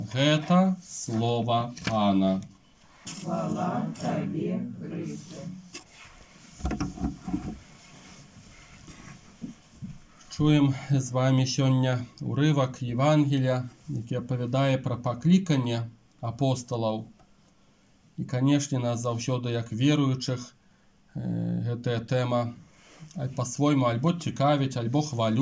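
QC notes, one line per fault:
No technical faults are detectable anywhere in the signal.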